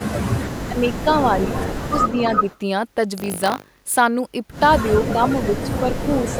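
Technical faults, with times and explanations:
0.0–1.15 s, 1.87–2.16 s and 5.13–6.39 s, speech suppressed in double talk: the speech dips by up to about 15 dB early on and about 10 dB later, in broken stretches. This is likely an echo canceller ducking everything while both sides talk. The waveform shows sudden envelope notches, and the spectrogram shows thinned, gappy upper bands.
1.25–2.58 s and 5.05–6.35 s, echo leak: a fainter copy of the speech trails 338 ms behind, about 10 dB down. This is likely loudspeaker pickup that the far-end canceller failed to remove. The spectrogram shows faint harmonic patterns repeating after a fixed lag.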